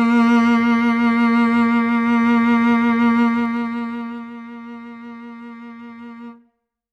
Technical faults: zipper noise

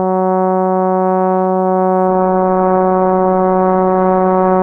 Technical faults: adaptive stream at a lower bitrate

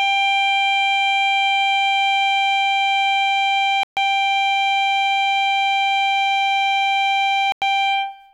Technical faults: Bluetooth stall

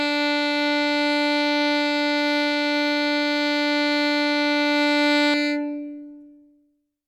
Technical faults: channel delay (comb filtering)

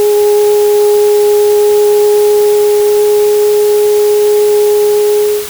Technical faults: low bit depth with dither

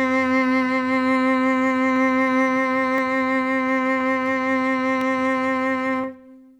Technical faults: periodic USB or driver dropouts

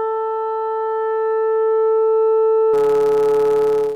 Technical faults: block size mismatch (truncated)

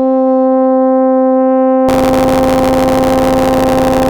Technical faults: buffer tearing

